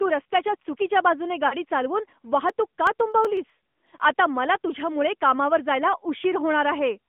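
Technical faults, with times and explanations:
Throughout: AMR narrowband mobile codec. Band runs 200 Hz to 3.5 kHz, with plainly audible buzzy, synthetic coding that fits a mid-rate mode near 10 kbps.
1.48 to 1.54 s: lost AMR speech frames. A 40 ms gap, which fits two 20 ms frames, is filled from earlier pitch and tract settings, giving a brief warbling dip.
2.50 to 4.00 s: CD scratch ticks. Thirteen ticks of a few milliseconds each, roughly nine per second, come as the player patches damaged data once per disc turn.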